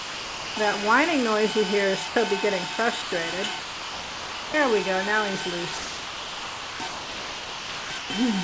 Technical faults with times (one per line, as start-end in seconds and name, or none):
0.00-0.56 sound dropped by the voice detector
2.08-2.16 sound dropped by the voice detector
3.02-3.12 sound dropped by the voice detector
3.60-4.54 sound dropped by the voice detector
5.78-8.10 sound dropped by the voice detector